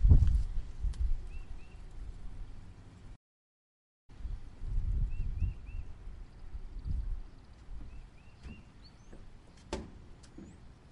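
At 3.15 s the audio cuts out and stays silent until 4.10 s, a gap of about 930 ms, before resuming. This is a playback stall, likely from the player running out of buffered data or its output thread being blocked.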